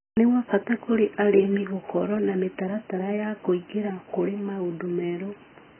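From start to finish the speech sounds dull and muffled, with a smeared, warbling texture and fizzy sibilants, which is likely AAC compression at a very low bitrate. Starved of bits, the encoder has discarded everything above 3.1 kHz and coarsely quantised what remains. On a spectrogram, energy stops at a hard horizontal edge near 3.1 kHz, with patchy holes and blocky gaps scattered through the bands below it.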